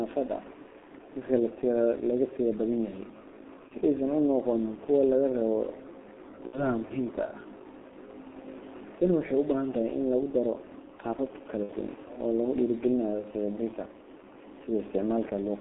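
Throughout, the speech passes through the G.723.1 codec at 6.3 kbit/s, with the line band limited to roughly 250 Hz to 3.5 kHz. Its coarse 30 ms frames and slow model updates leave the speech heavily muffled and hoarse, with smeared consonants.

VoIP packet loss concealed by the speech codec follows at 3.68 to 3.72 s (one 30 ms frame), 6.47 to 6.71 s just before "muhiimka ah", and 11.63 to 11.73 s right after "in lagu daro qaabab", the last two each losing 60 ms. The decoder stretches its last frame into a fading buzzy tone or coloured noise.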